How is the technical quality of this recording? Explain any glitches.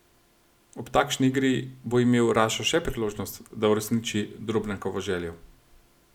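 No audible glitches or faults.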